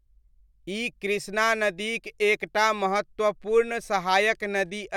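No technical faults can be heard anywhere in the recording.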